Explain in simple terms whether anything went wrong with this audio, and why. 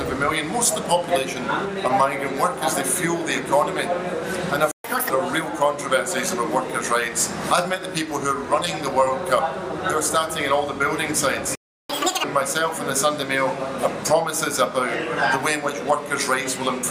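The sound cuts out twice: a playback stall at 4.71 s lasting about 130 ms, and another at 11.55 s lasting about 340 ms. The player likely ran out of data or was briefly blocked.

Right after each gap comes a catch-up at higher speed. From 4.84 to 5.10 s it plays at 1.5 times speed, pitch up around seven semitones. From 11.90 to 12.24 s it plays at double speed, pitch up roughly ten semitones. The player is rushing to recover lost time.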